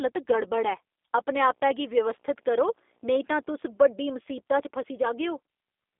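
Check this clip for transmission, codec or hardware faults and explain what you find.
Two faults are present: G.729 codec damage across the whole recording and a burst of video or display buzz in the middle.

The G.729 codec shapes the speech throughout. Only the band from about 300 Hz to 3.6 kHz survives, with nothing above 3.6 kHz, and the voice has the rough, slightly synthetic grain of a model-based coder. That grain is plainly audible and fits an 8 kbit/s G.729A link. Each short frame is rebuilt from a vocal tract filter, a pitch predictor and a few sparse pulses rather than from the waveform itself. The buzzy, mechanical texture sets it apart from a simple telephone band-limit, which narrows the sound without making it artificial.

Video or display buzz runs from 1.27 s to 3.88 s. A screen or its cable is leaking into the audio path, adding a faint buzz at 60 Hz, the picture's field rate, with a thin hash of harmonics above it. 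It sits far below the speech. Mains hum can also sit at 60 Hz, but it is a smoother tone without the gritty overtones. Hum would also normally be present all the way through, whereas this buzz starts and stops with the display interference.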